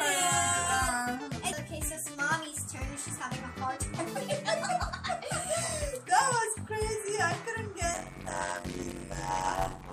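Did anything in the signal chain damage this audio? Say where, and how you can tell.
Yes, at the driver or buffer stage, from 7.94 s to the end of the clip. A steady buzz at about 92 Hz appears, and the sound slows to 0.53 times speed while keeping roughly normal pitch. This is a block size mismatch (padded). Short written blocks, which fits 256 samples, are zero-filled to a longer read size, inserting a gap per block.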